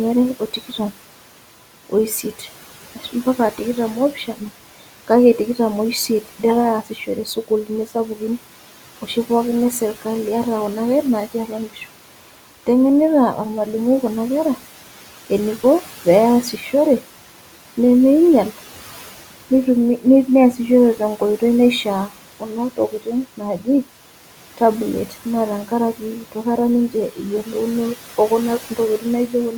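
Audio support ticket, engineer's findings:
Noise suppressor artifacts, whole clip. Background dips about 12 dB between phrases, swells back under speech. Frame-by-frame band gating on the suppressor. Room noise sits about 19 dB under speech.

DC step, 16.93 s to 20.97 s. Low thump going in, audio carries on fine between. Zero line jumps and holds. Likely converter recalibration or an offset input switched in.

Speech cut by the noise suppressor, 22.77 s to 23.07 s. Bits swallowed, about a tenth of a second in total, dropping up to about 11 dB. Suppressor mistook quiet speech for noise and turned it down with the background.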